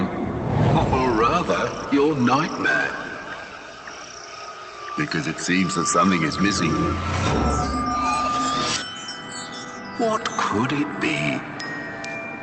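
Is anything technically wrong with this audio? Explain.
No, nothing stood out on listening, beyond the top end stopping at around 8 kHz as expected from the WebRTC call path it came through.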